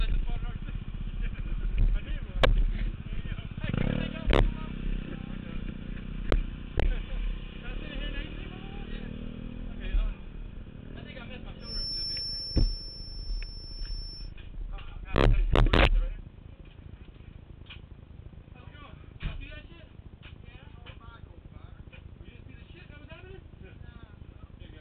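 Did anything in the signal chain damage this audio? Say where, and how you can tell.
Yes. The likely cause is an acoustic loop at the playback stage, with a loudspeaker feeding back into the microphone and sitting just at the edge of instability. From 11.58 to 14.33 s a feedback whistle appears as a thin, steady tone at 5.4 kHz, roughly 10 dB below the main sound, swelling and fading slowly in level. Because the loop gain hovers near unity, that one frequency keeps ringing without building into a runaway howl.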